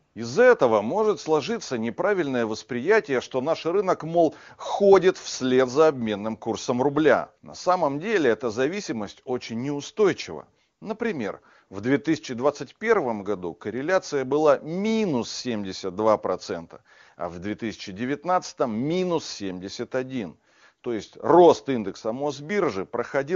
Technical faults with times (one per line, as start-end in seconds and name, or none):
0.05-0.15 AMR comfort noise
10.79 AMR comfort noise